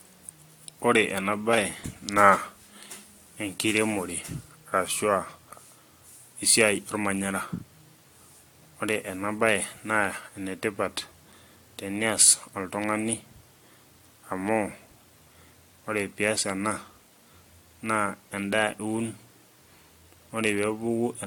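From start to finish the speech has a swirly, smeared quality, with a hollow character and softened consonant attacks, more than a single moderate-rate encode would leave, and nothing is present above 19.2 kHz. This points to generation loss: the audio was likely decoded and re-encoded about three times through AAC-LC, at a rate consistent with 96 kbit/s. Each pass re-quantised on a shifted frame grid, stacking noise and spectral gaps.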